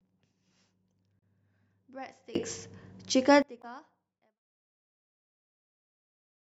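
At 1.19 to 1.23 s the speech is broken by a brief glitch, the sound of damaged data in a compressed stream. Part of the coded stream is corrupt there. The decoder misreads the affected frames, loses sync and resumes at the next valid frame header, so the audio blips.

From 2.35 to 3.42 s there is a sudden gain jump. Both the speech and the background noise step up together by about 24 dB, and fall back just as abruptly. The likely cause is a digital gain setting or bit shift applied without any ramp.

A second burst of stream damage follows at 3.59 to 3.64 s, with the same kind of glitch as the first. It falls inside the smooth fade-out, which begins around 3.5 s and reaches silence at 4.41 s.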